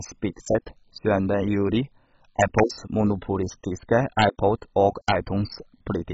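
Throughout the speech, the encoder has too few bits, likely from MP2 compression at a rate that fits roughly 16 kbps. Upper sub-bands are dropped entirely, leaving nothing above 7.5 kHz, and the remaining bands are coarsely quantised, giving a dull, gurgling, granular sound.

At 2.40 to 2.60 s, 4.19 to 4.25 s and 5.09 to 5.12 s, integer overflow occurs: peaks exceed the integer limit by about 2 dB and wrap to the opposite sign instead of being limited, producing violent cracks far harsher than clipping.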